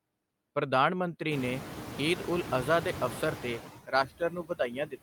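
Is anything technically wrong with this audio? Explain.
Yes, there are two faults.

Noise suppressor artifacts run through the whole clip. The suppressor estimates the steady background and turns down the bands it judges to be noise, frame by frame, cutting it by about 12 dB. As a result, the room noise dips in the gaps and returns under the speech. That room noise itself is part of the recording and climbs by about 19 dB at around a second and a half, staying about 12 dB below the speech.

Speech cut by the noise suppressor occurs from 3.86 s to 5.02 s, the end of the clip. Here the suppressor mistakes the speech for background and lowers it along with the noise, by as much as about 22 dB at the deepest point, so the final stretch sounds swallowed and faint.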